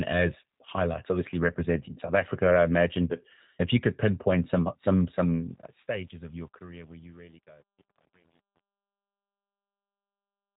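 From start to finish the speech sounds slightly rough and synthetic and is cut off above 3.8 kHz. This is plainly audible G.729 coding, which rebuilds every 10 ms frame from a vocal tract filter, a pitch predictor and a few pulses, consistent with an 8 kbit/s stream.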